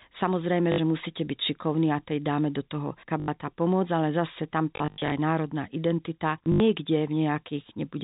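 Speech heard through a G.711 telephone channel, with packet loss where the last packet is repeated at 0.72–0.78 s, 3.2–3.28 s, and scattered through 4.76–5.12 s and 6.44–6.6 s. Each gap loops a short fragment that buzzes near 50 Hz, which fits 20 ms packets. The result is a robotic stutter rather than the silent holes that plain dropouts leave.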